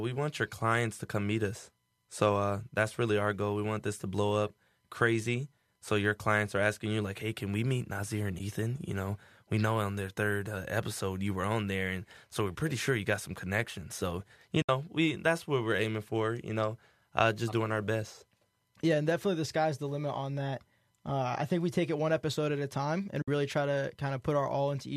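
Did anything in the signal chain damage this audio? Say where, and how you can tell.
Yes. AAC frame loss with muting, from the network and decoder, leaves soft holes at 8.39 s, at 14.62–14.69 s just before "we that's what we're", and at 23.22–23.28 s between "episode at a time" and "really try to". The decoder zeroed the lost frames, and the overlapping windows faded in and out around each one. The roughly 10 ms gap steps point to a likely low-delay AAC stream.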